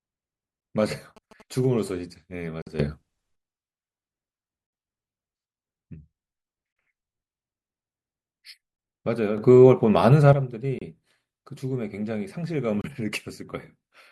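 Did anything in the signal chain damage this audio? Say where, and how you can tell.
Yes. In the analogue wiring, a nearby 2G phone's radio bursts were rectified into the audio path. This produced GSM signalling bursts from 1.17 to 1.89 s: a galloping dit-dit-dit of short buzzes at a 217 Hz rate, about 20 dB below the speech.

At the network or playback stage, the timestamps of consecutive stream segments left small gaps that the player filled with silence. The result is a gap between stream segments, heard as hard-edged holes of 49 ms at 2.62 s, 37 ms at 6.73 s, 29 ms at 10.79 s and 28 ms at 12.81 s. The spacing fits 2-second segments, and no speech is lost.

In the digital processing, a gain setting was likely applied from one sample to the next without a ramp. This is a sudden gain jump: from 2.79 to 3.36 s, speech and background noise rise together by about 12 dB, and from 9.38 to 10.33 s by about 8 dB. 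Each change is abrupt rather than faded.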